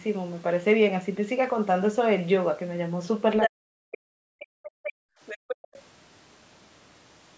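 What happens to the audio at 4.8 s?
At 4.8 s the room sound is being held down by the echo canceller. From 4.24 s to 5.21 s, background gated by the echo canceller pulls the microphone level down while the loudspeaker path is active, with the deepest dip at about 40 dB. The gating is intermittent, adding up to roughly 0.7 s of that span. The ambience thins or vanishes in patches and comes back once the canceller releases.

Overlapping that, from 4.63 s to 4.92 s, the other side's voice leaks through. A second voice sits around 10 dB below the main speech. The likely cause is loudspeaker playback reaching the microphone and not being fully cancelled, so the residue of the far end's audio survives into the send path. It is quieter than the talker in that short window.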